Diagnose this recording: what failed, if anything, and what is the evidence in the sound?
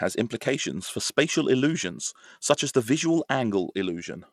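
The codec stage failed: the speech was likely squeezed through Bluetooth SBC compression with a starved bit pool, which fits a rate near 96 kbps. Throughout, the upper sub-bands lose their bits, so the treble flickers and drops out, and coarse quantisation leaves gritty noise and aliasing.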